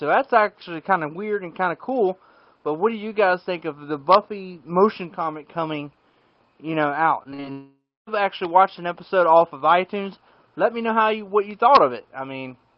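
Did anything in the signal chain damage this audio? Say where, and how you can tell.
Yes, the damage happened on the network. Between 7.23 and 7.46 s, packets went missing or arrived late several times in quick succession, causing repeated packet loss (robotic sound). The receiver patched each hole, the longest about 43 ms, by extending the last bit of sound it had. Close to half of that stretch is synthetic fill, so the audio turns choppy, with short pieces simply gone.

Right after that, from 7.52 to 8.09 s, the sound stops coming through. What you hear first is a smeared continuation of the last sound, like a fading buzz or hiss. For the last 280 ms or so of that span, there is near silence. The audio then resumes with more than half a second missing. The likely cause is a long network dropout, with nothing reaching the receiver until the stream recovered.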